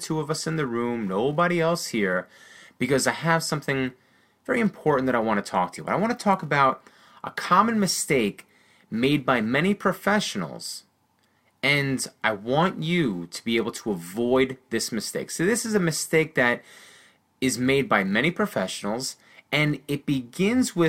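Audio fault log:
throughout, filter restarted on every block: a steady buzz near 345 Hz riding the speech, tracking its loudness, since each 128-sample block restarts the filter from silence.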